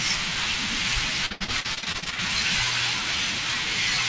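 Speech sent over a call link, with repeated packet loss (robotic sound) from 1.26 to 2.2 s. A rapid run of dropouts, the longest about 80 ms, is each patched by extending the preceding sound, so nearly half that stretch is concealment and comes out choppy. Nothing is present above 8 kHz, which fits a G.722 wideband call codec.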